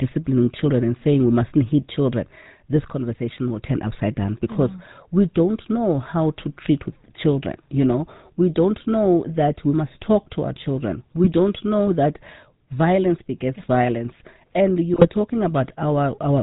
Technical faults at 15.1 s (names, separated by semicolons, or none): GSM full-rate codec; GSM bit errors